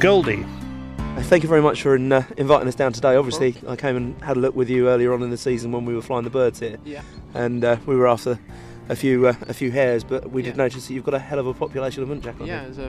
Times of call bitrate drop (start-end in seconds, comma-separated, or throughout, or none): none